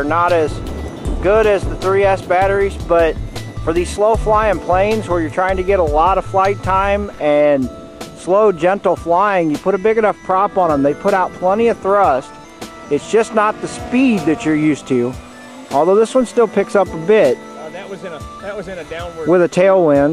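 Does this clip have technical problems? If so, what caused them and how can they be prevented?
No, there are no technical problems to report here.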